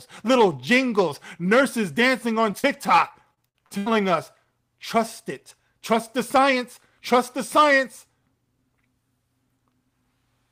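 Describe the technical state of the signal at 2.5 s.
Two short concealed packet losses sit right at this point, from 2.51 to 2.55 s and again from 2.59 to 2.65 s. Roughly 20 ms and then 40 ms of audio failed to arrive in time, and the decoder bridged each gap by extending the preceding sound before blending back into the received signal. The result is a quick double smear, a wobble in the sound.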